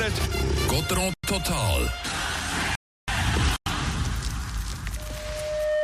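At 1.14 s and again at 3.56 s there's a gap between chunks: a hard-edged 100 ms hole where silence was left at the join between blocks of audio, which fits chunks of about 2 seconds. Nothing's missing; the sound just breaks and picks straight back up.

In between, from 2.75 to 3.08 s, you get a rebuffering stall. The player ran dry of downloaded audio and sat in silence until more arrived, then resumed exactly where it stopped. Nothing is lost, but it adds about a third of a second.

From 4.96 s to the end there's loudspeaker feedback squeal. A mic is picking up the speaker it feeds, and around 607 Hz the loop gain tipped over one. That tone swells in under a second into a steady squeal about 5 dB above everything else.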